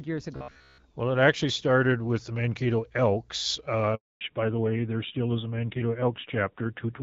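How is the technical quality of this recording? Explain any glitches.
The recording has three clear faults: a robotic stretch near the start, a short dropout in the middle, and a loss of bandwidth that lasts to the end.

From 0.36 to 0.86 s the speech takes on a rigid, metallic buzz at 66.7 Hz. This is robotic sound from repeated short buffers, likely caused by audio arriving too seldom. The player loops roughly 15 ms segments for most of this stretch while the real audio is skipped.

From 3.95 to 4.21 s there is a handover gap. The call switched networks and no speech frames arrived, so the sound falls away quickly and stays silent for 260 ms. Whatever was said in that window is gone.

From 4.21 s to the end there is a fallback to narrowband. Up to this point the call carries light AMR wideband (HD Voice) coding, which fits about 12.65 kbit/s. Afterward nothing is present above 4 kHz. The speech turns duller and rougher, consistent with AMR-NB at around 7.4 kbit/s.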